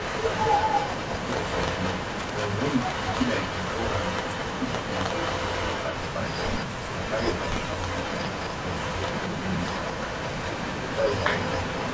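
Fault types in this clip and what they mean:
Echo leak: A delayed copy of the speech runs about 214 ms behind it and only a few decibels quieter. It covers almost the whole clip, with short breaks near 6.7 and 7.5 s. It is likely loudspeaker pickup that an echo canceller failed to remove.
Speech suppressed in double talk: Near 7.8 s, while both sides overlap, the speech dips by roughly 10 dB for about 50 ms. The likely cause is an echo canceller that could not tell its own talker from the echo, so it turned both down.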